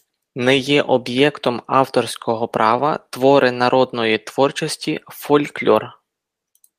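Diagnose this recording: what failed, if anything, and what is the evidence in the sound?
Nothing failed in this recording, and the sound gives no evidence of any fault.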